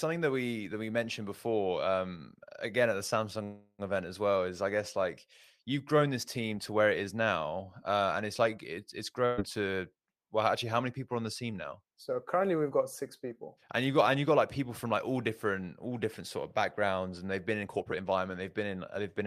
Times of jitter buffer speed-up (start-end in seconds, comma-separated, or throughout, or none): 17.63-19.20